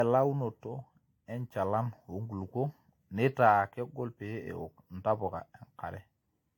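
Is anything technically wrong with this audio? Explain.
Yes. Generation loss runs throughout the speech: the sound is swirly, smeared and hollow, with blurred consonant attacks and nothing above 19.3 kHz. The likely cause is repeated lossy re-encoding, around seven passes, consistent with AAC at about 96 kbit/s, each requantising on a shifted frame grid so artefacts accumulate.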